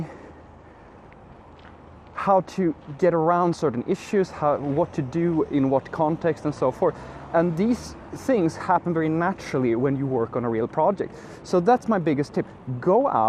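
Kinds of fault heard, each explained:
MP2 compression: Throughout the clip the sound is dull and carries a gurgling, granular roughness, and this is plainly audible. The likely cause is MPEG Layer II coding at a low rate, which fits about 80 kbps. That coder divides the spectrum into 32 sub-bands and shares out a small bit budget. The upper bands get starved and drop in and out, and the bands that remain are coarsely quantised.
DAB burbling: From 8.18 to 8.27 s there is a brief burst of burbling over the programme. It comes from transmission bit errors at a low rate, around a tenth of a percent, that slipped past error correction into the compressed data. Across seven frames, corrupted samples put short blips of noise into single sub-bands and corrupted scale factors, where they get through, make sub-bands jump in level for up to a frame, and that produces the burbling.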